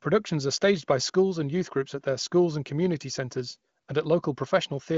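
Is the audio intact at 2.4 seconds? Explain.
Yes, the speech at 2.4 seconds is intact, carried cleanly through the AMR wideband (HD Voice) codec, which leaves nothing above roughly 7.5 kHz.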